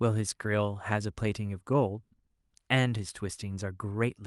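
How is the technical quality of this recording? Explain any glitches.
No glitches in the speech; the only audible trait is the call path itself, whose top end stops around 12 kHz, consistent with an Opus stream at about 48 kbps.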